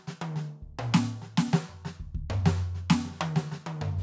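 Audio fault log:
Nothing to log here, as the music runs along without a single fault turning up anywhere.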